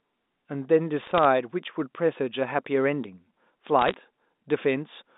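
Telephone speech with two short bursts of sharp, ticking crackle, from 1.0 to 1.25 s and from 3.79 to 3.94 s. These are bit errors on a digital phone line: a few tenths of a percent of bits flipped, each one corrupting a single sample of the G.711 A-law signal.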